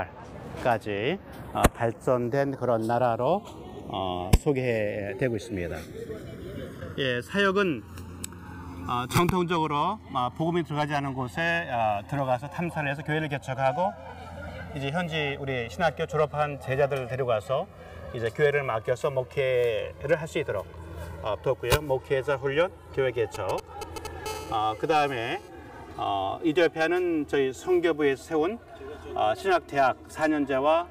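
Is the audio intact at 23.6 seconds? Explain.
No. From 23.35 to 24.07 s there are GSM signalling bursts: a nearby 2G phone transmits short groups of radio bursts, and the audio circuit rectifies them into a galloping dit-dit-dit of 217 Hz buzzes, only a few decibels below the sound. Mains hum is a steady tone at 50 or 60 Hz. These buzzes sit at 217 Hz and arrive in grouped, rhythmic clusters.

The channels are also drifting apart at this moment, as they do throughout. The two sources run on separate clocks, about 100 ppm apart, so the delay between them slides steadily toward roughly 3 ms. Summed to mono, comb notches sweep slowly, which sounds like slow flanging. A flanger effect sweeps back and forth. This sweep moves in one direction only, as the offset grows.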